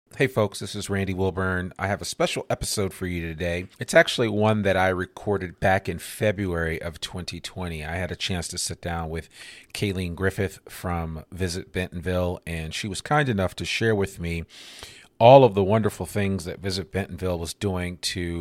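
No technical faults are audible.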